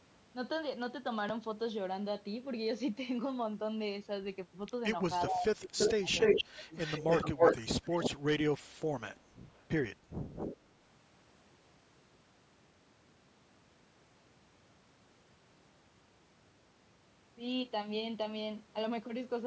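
From 5.28 to 7.04 s, speech is suppressed in double talk. For about a second in total, it dips by up to roughly 25 dB or breaks into pieces, likely from an echo canceller ducking both sides at once. The gaps follow the overlap, not random dropouts.

An echo leak brings back a distinct copy of the speech 296 ms late at 5.78–6.44 s and 6.77–8.1 s, about 5 dB above the speech. It returns faintly at 9.49–9.64 s, about 35 dB down, and at 10.35–10.57 s, 251 ms late and about 5 dB down. A loudspeaker-side canceller likely missed it. It is a discrete repeat, not a smooth reverberant tail.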